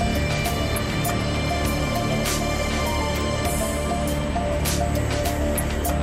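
A steady USB whine sits at 8 kHz throughout, roughly 25 dB below the signal. Current drawn in USB microframes leaks through power or ground.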